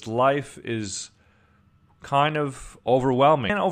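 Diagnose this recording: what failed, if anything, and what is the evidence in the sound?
The failure is at the codec stage: damaged data in a compressed stream. At about 3.49 s, near the end of the speech, a brief glitch cuts in for roughly 12 ms. Corrupted bytes in the encoded frames make the decoder mis-read what it is given, lose frame sync, and hunt for the next valid header before normal decoding resumes. On a spectrogram this shows as a narrow vertical smear of broadband or oddly patterned energy. The waveform shows a short discontinuity that breaks from the surrounding envelope.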